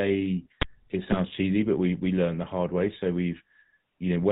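Throughout, the speech carries the buzzy, gravelly roughness of the GSM full-rate codec, consistent with its 13 kbps rate. The codec models the vocal tract and drives it with regularly spaced pulses, discarding most excitation detail and cutting everything above 4 kHz, so the damage is plainly audible.

From 1.08 to 1.19 s, GSM bit errors break the speech into a brief squawk and gargle. Corrupted filter, pitch and gain parameters distort the spectrum and level for each affected frame. This roughly 0.1 s disturbance fits about five damaged frames.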